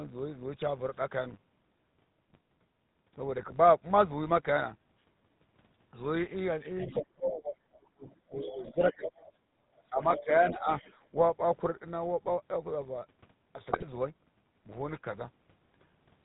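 A steady buzz at 100 Hz runs under the whole clip, rising and falling with the level of the speech rather than sitting at a fixed volume. That is the sign of a filter restarted on every block. The filter loses its memory at each block boundary and starts again from silence, so each block opens with a small transient. Repeating at 100 Hz, those transients fuse into a buzz, which fits processing in 10 ms blocks.

Also present from start to finish is a buzzy, gravelly roughness, with nothing audible above 4 kHz. This is the GSM full-rate codec, and the damage is plainly audible. The sound fits its 13 kbps rate. The codec models the vocal tract and feeds it a sparse pulse excitation that keeps only every third sample, which gives the grainy, rasping texture. Its narrow band removes all the high end.

From 3.41 to 3.57 s the sound breaks into squawks, pops and gargling, and it happens again from 13.70 to 13.85 s. 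These are GSM bit errors. Flipped bits reached the decoder, so the filter, pitch or gain values it used were wrong. The result is a bent spectrum or a jump in level for each damaged frame, and several frames in a row were hit each time.

Between 6.80 and 7.05 s a second voice can be heard about 15 dB below the main speech. The other side's voice leaking through is the likely cause: audio from a loudspeaker reached the microphone and the echo canceller did not fully remove it. It returns from 8.90 to 9.30 s and from 10.02 to 10.28 s, each time about 10 dB below the speech.

From 6.86 to 9.09 s the main speech dips and breaks up in pieces, falling by around 30 dB at its deepest, for roughly two seconds in total. A second, milder stretch runs from 9.90 to 10.69 s, with dips of around 15 dB over about half a second. The likely cause is speech suppressed in double talk. With both sides active at once, the echo canceller could not separate the talker from the loudspeaker echo and turned everything down.

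At 9.46 to 9.62 s the room sound itself drops by about 13 dB for roughly 150 ms and then comes back. This is background gated by the echo canceller. While the loudspeaker was playing, the canceller pulled the microphone down hard, and the room sound returned once it let go.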